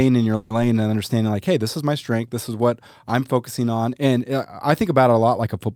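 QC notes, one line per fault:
0.35–0.52 s, call audio freeze: the sound stalls and is stretched into a short fading buzz or hiss of about 150 ms, then resumes exactly where it stopped with nothing lost, only delayed by about 150 ms. Likely held-up packets draining the jitter buffer, so the receiver extended the last sound.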